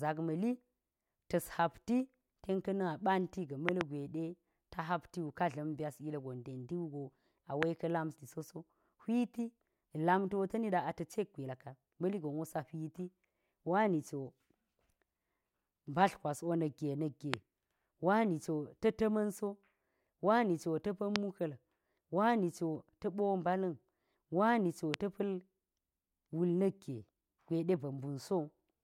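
Loud pops at 3.69–3.83 s (a quick double pop), 7.63, 17.34, 21.16 and 24.94–24.96 s stand out in this speech as sharp thumps about 20 to 25 dB above it, with the speech continuing underneath, likely from sudden voltage pulses such as a plug, switch or static discharge.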